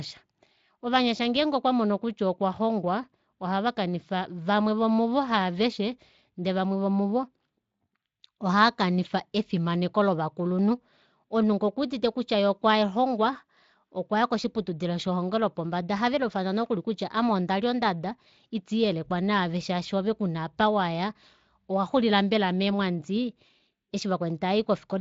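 The speech recording shows no technical faults: it was carried over Speex at about 24 kbps with only light coding effects, and its content stops at about 7.6 kHz.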